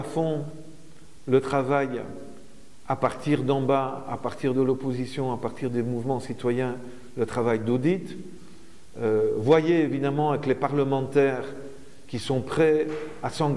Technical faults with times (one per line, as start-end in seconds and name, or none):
none